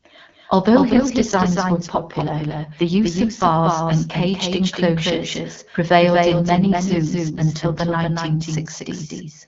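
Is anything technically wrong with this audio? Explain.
Yes, there are two problems in this speech recording.

A doubled audio track runs through the whole clip. A second full-band copy of the speech trails the original by about a fifth of a second, roughly 5 dB quieter. The likely cause is the same signal arriving twice, once through a slower path. The copy has no reverberant tail or room colouring, so it sounds like a distinct, clean slapback echo behind every syllable rather than a natural reflection.

An AMR rate drop happens twice, from 0.89 to 3.46 s and again from 6.2 to 8.11 s. On a weak radio link the network makes the wideband AMR coder give up bits for error protection. Here the sound fits a fall from about 12.65 to 6.6 kbit/s. The bandwidth stays the same and nothing drops out, but in those stretches the voice turns audibly rougher, raspy and synthetic. Between and after them it returns to the clearer quality of the HD Voice coder at its normal rate.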